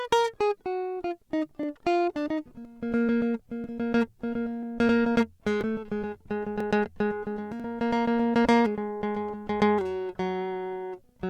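At 1.63, 2.65, 3.64, 4.63, 5.61, 6.60 and 7.60 s the music skips, from overlap between stream segments: about 1 s segments whose timestamps overlap get trimmed, discarding a few milliseconds of real audio. The waveform shows a sudden step at each spot, and the spectrogram shows a thin vertical broadband line.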